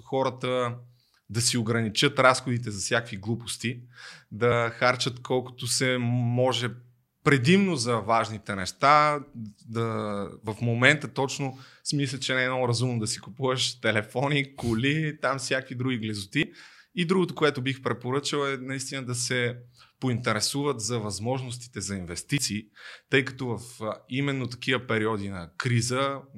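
Three abrupt skips cut into the speech at 10.47 s, just before "момента точно смисля че", at 16.43 s, right after "коли там всякакви други", and at 22.38 s, after "поинтересуват за възможностите за". Each drops roughly a twentieth of a second, with the two sides butted together and no gap. The regular six-second spacing makes audio missing between chunks the likely cause, with a short slice lost each time one block closed and the next opened.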